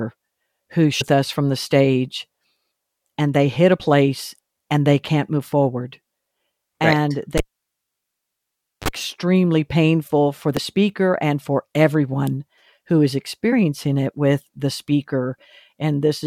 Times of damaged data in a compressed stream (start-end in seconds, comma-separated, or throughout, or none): 1.00, 3.79, 10.57, 13.52